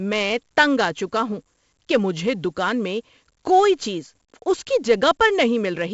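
From start to finish the speech carries 4-bit ADPCM compression, and the damage is heavy. Each sample is coded as a coarse step from a predicted value, so the error rides along with the level. Loud syllables get a gritty hiss, and sharp onsets distort as the step size lags behind. Nothing is present above about 7.7 kHz, which dulls the sound and points to a 16 kHz sample rate at 64 kbps.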